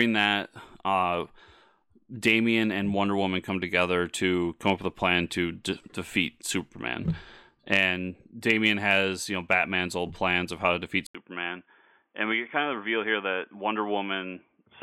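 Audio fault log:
11.07–14.83 s, input switched to a poorer device: capture likely moved to a narrower-band microphone, so after an 80 ms gap the speech loses everything above 3.5 kHz, drops about 5 dB, and gains faint new background noise.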